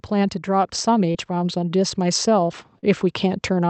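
Speech carried over a call path that tops out around 8 kHz, with two kinds of fault. From 0.09 s to 2.59 s, automatic gain rising lifts the level gradually by about 5 dB. Because the control changes its own gain, voice and background noise swell together over those two and a half seconds. A talker moving closer would raise the voice but leave the room noise where it was. There are two short concealed packet losses, at 1.11 to 1.17 s and 2.79 to 2.85 s. Each time, about 40 ms of audio never reached the decoder in time, and the receiver patched the hole with 32 ms and then 40 ms of sound extrapolated from what came just before. That is why these spots smear or wobble briefly and a short consonant can disappear. A plain dropout would instead leave a clean gap of silence, and a click would be a single sharp transient.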